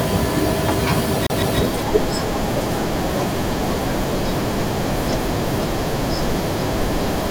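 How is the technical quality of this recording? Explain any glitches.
The recording has one audible glitch. CD stuck on one turn, 1.27 to 1.59 s: the pickup jumps back one track, replaying a 160 ms slice of speech twice as a quick, even stutter with short mutes.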